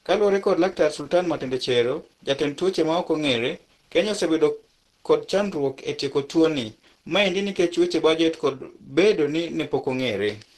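From start to finish the speech sounds muffled and hoarse, with a grainy, roughened texture on voiced sounds, and nothing reaches above 12 kHz. The damage is plainly audible throughout. The likely cause is Opus compression running in its hybrid mode, where low frequencies are coded as speech and the upper band is reconstructed sparsely. That leaves the top end cut off and the tone coarse, which fits a low bitrate around 16 kbps.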